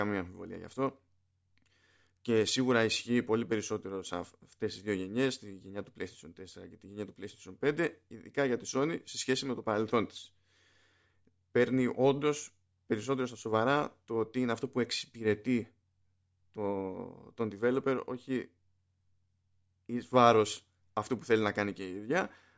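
Speech recording, no technical faults detected.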